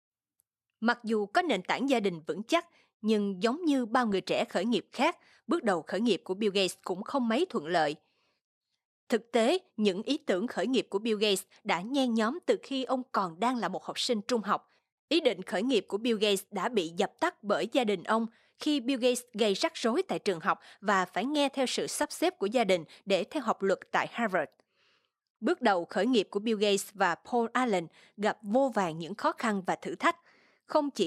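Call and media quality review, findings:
DAB burbling, 4.11–4.13 s and 21.95–22.05 s. Brief burbling over speech. Weak reception: residual bit errors at about 0.1–0.2 percent pass error correction into MP2 data. Corrupted scale factors make single sub-bands jump in level for up to a frame.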